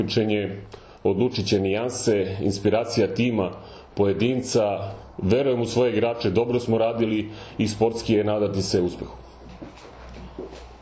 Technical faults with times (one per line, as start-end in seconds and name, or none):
none